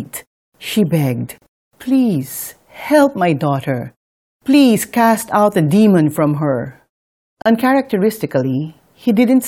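At 1.38 and 7.42 s, a gap at a join of encoded pieces: 37 ms of silence from untrimmed encoder delay and padding, recurring every 6 s, with speech resuming exactly where it stopped.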